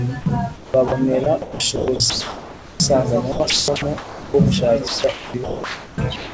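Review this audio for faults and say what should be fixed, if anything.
Sound dropped by the voice detector at 0.22–0.26 s: about 40 ms of speech gives way to flat, steady noise, most likely because the sender's voice detector classed a quiet moment as background and sent comfort noise instead. On a waveform the envelope collapses to a thin, even band; a spectrogram shows a smooth noise patch with no harmonics.

Sound chopped by the voice detector occurs across 0.56–0.92 s, 1.24–2.80 s, 3.32–4.34 s and 4.88 s to the end. Speech repeatedly cuts to synthetic noise, with about 220 ms, 1060 ms, 680 ms and 1080 ms replaced, likely from the detector toggling between sending and muting. The waveform shows abrupt gaps of uniform low-level fill. The spectrogram shows harmonic speech alternating with featureless noise blocks. The real room noise sits about 22 dB below speech. The band limit at 8 kHz from the wideband call codec runs through all of it.

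To prevent both, lower the voice detector's sensitivity threshold and add hangover time, or disable discontinuous transmission on the sending side.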